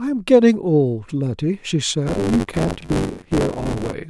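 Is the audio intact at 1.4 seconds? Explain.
Yes, the speech at 1.4 s plays through without any dropout, glitch or other fault.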